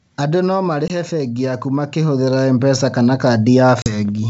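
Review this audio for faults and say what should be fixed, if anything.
Automatic gain falling from 0.06 to 1.17 s: the AGC decided the speech was too hot and eased its gain down by about 5 dB, so voice and background sink together.

Automatic gain rising from 1.1 to 3.56 s: it then found the input too quiet, pushing gain up by about 10 dB, and the whole sound swells slowly along with the room noise.

Packet loss on an ADPCM call at 0.88 to 0.91 s (a 20 ms hole, about one packet) and at 3.82 to 3.94 s (40 ms, roughly two packets): each gap is a hard-edged silence. Afterward the decoder's predictor and step size no longer match the sender's, so the speech comes back slightly distorted before it settles. The wideband G.722 coding itself stays clean around these gaps.

To fix it, slow down the AGC's attack and release or raise its target so it stops hunting, and add packet loss concealment with decoder state recovery, plus some jitter buffering, on the ADPCM link.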